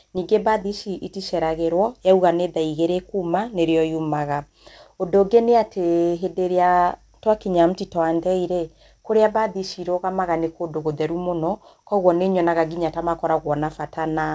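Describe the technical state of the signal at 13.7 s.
At 13.7 s the signal is intact, with nothing faulty to hear, just the band-limited sound of the WebRTC call path, whose G.722 coding leaves nothing above 8 kHz.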